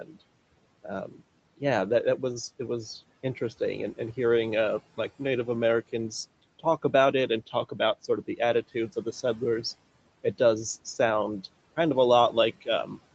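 Right at the start, from 0.04 to 0.17 s, there's speech cut by the noise suppressor. The suppressor mistook the opening of the speech for background and pulled it down along with the room noise, by about 12 dB at its deepest, for roughly a tenth of a second in total. So the first sound comes in swallowed and faint before the level recovers, sitting over a gentle room noise and a top end that stops around 8 kHz.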